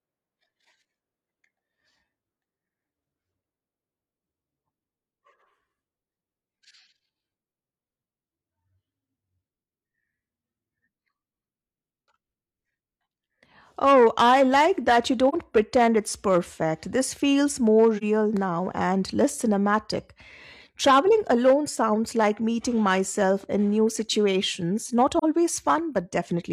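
Speech with three brief, soft-edged dropouts: 15.29 to 15.34 s after "I like that you", 17.97 to 18.03 s after "feels more", and 25.18 to 25.24 s after "in new situations not". Each hole fits AAC frame loss with muting. About 43 ms of spectrum was zeroed, and the overlapping windows fade the sound out and back in.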